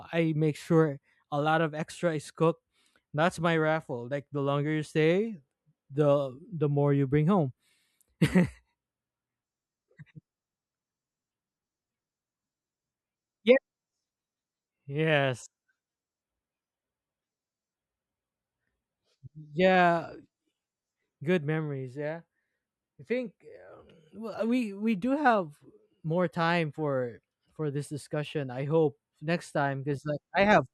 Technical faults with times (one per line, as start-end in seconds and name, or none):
none